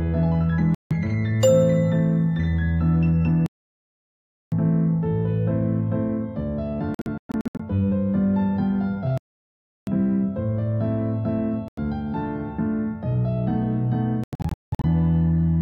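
At 0.75 s the sound drops out for about 0.16 s and comes back further along, as though it had kept playing underneath. This is likely a Bluetooth dropout, where packets miss their delivery window to the headphones and are discarded, leaving silence. The same gap pattern returns at 6.95 to 7.60 s as a scatter of short holes, the longest about 0.12 s, then at 11.68 s for roughly 0.09 s, and from 14.24 to 14.85 s as broken gaps totalling about 0.44 s, the longest about 0.19 s.

From 3.46 to 4.52 s the output halts mid-flow for about 1.06 s and then carries on, which likely marks a playback stall caused by the player running short of data or its audio thread being blocked. A second stall, lasting about 0.70 s, runs from 9.18 to 9.87 s and resumes the same way.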